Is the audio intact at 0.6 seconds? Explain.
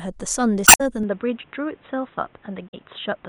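No. Right around that point, from 0.64 to 0.81 s, there is damaged data in the compressed stream. Bytes in that stretch of the encoded speech are corrupted, so the decoder misreads or rejects those frames, loses synchronisation and has to hunt for the next valid frame header before it can resume. For roughly a sixth of a second, the speech gives way to a short, artificial chirp, squawk, click or hole.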